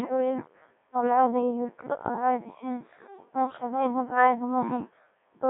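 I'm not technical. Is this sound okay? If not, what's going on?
No. The speech has gone through a Codec 2 vocoder throughout. It keeps only the pitch and outline of the voice, then rebuilds it from tones, so it sounds robotic and buzzy.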